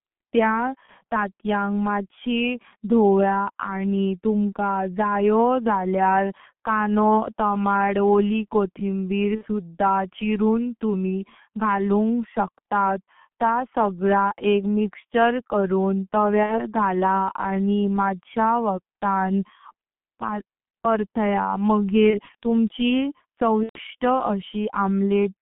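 From the first second to the last, the speech carries the G.723.1 codec sound. The line is squeezed to roughly 150 Hz to 3.5 kHz, so the top end is gone and everything sounds muffled. The damage is heavy: the codec's slow-moving voice model leaves a hoarse, grainy texture and smears the consonants together, which is what you'd expect from a 6.3 kbit/s G.723.1 stream working in 30 ms frames.

On top of that there are six dropouts where VoIP packet loss was concealed by the speech codec: 0.86 to 0.90 s, 9.35 to 9.46 s, 13.04 to 13.07 s, 16.43 to 16.65 s, 22.10 to 22.21 s and 23.63 to 23.80 s. In each one the decoder has nothing new to work from, so it keeps stretching the last pitch and filter while turning the level down. You hear a short, fading buzzy tone or coloured noise instead of speech. The gaps at 0.86 and 13.04 s are brief and fit a single lost 30 ms frame. The ones at 9.35 and 16.43 s fit about 60 ms missing. 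At 23.63 s the gap runs about 120 ms, which points to several frames in a row, so that loss is the longest, and the codec mutes it from the third lost frame on. The longer events also stay weak or distorted after the gap, because the decoder has to rebuild its state once packets arrive again.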